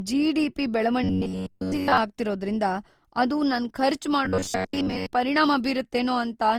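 Across the whole speech clip there is generation loss: a swirly, hollow, smeared quality, with consonant attacks softened. The likely cause is the audio being run through Opus at 48 kbit/s about four times, each re-encode quantising on a shifted frame grid so the noise and spectral gaps pile up. The band still reaches about 20.3 kHz, which separates it from a single low-bitrate encode, where the top end would be cut and the texture cleaner.

From 1.04 to 1.98 s, ending just before "ಆಗ್ತಿರೋದ್ರಿಂದ ಅದು ನನ್ ಖರ್ಚ್", and again from 4.25 to 5.09 s, right after those same words, the voice turns into a robotic sound from repeated short buffers. It becomes a rigid metallic buzz at 93.8 Hz that still roughly follows the syllables. The likely cause is audio arriving too slowly, so a chunk of about 10.7 ms is replayed to fill the gap, and most of the real sound in those spans is lost. Unlike the codec swirl, the buzz holds one fixed pitch whatever the intonation does.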